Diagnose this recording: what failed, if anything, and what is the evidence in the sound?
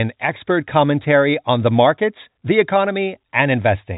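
Nothing has actually gone wrong here; the speech just comes down an ordinary G.711 telephone coding path, so the top end stops at around 3.8 kHz, which is exactly what that format does.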